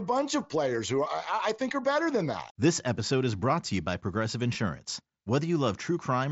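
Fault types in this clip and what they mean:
Concealed Bluetooth headset packet loss: One voice packet from the headset went missing at about 4.54 s. The receiver filled the 7.5 ms gap by repeating a closely matched stretch of the preceding waveform. It sounds like one lost frame, so the patch is nearly inaudible.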